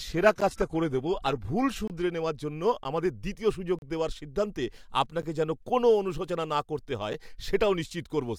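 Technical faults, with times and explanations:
0.00–2.03 s, adaptive stream starting at a low bitrate: dull, smeary treble with nothing above 14.9 kHz, then a sudden gapless lift in clarity, consistent with a stream starting near 20 kbit/s and stepping up.
0.41 s, 1.88–1.90 s, 2.84 s, 3.79–3.82 s, 5.22 s, 7.13 s, block of digital silence: ticks and short holes of about 8 to 34 ms, where the sound dropped abruptly to silence. The 11 ms gaps fit a 512-sample buffer not filled in time.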